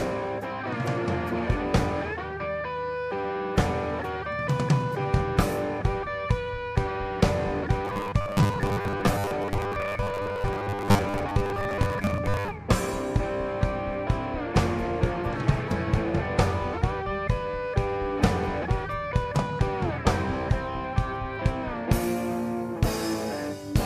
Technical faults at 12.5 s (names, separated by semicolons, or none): robotic sound from repeated short buffers